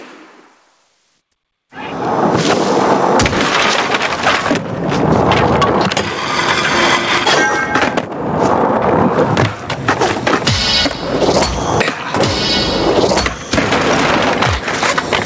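Gain pumping runs through the whole clip, with the level swinging by something like 25 dB. Loud and quiet passages sit unnaturally close together, so the sound feels squashed. The likely cause is input gain set far too high, with a fast limiter or compressor clamping down on every peak. A noise gate would do the opposite, pulling the gaps toward silence rather than lifting the background. Slow automatic gain drift wouldn't track each loud sound this quickly. Separately, the audio stops at 8 kHz, which fits a wideband call codec such as G.722.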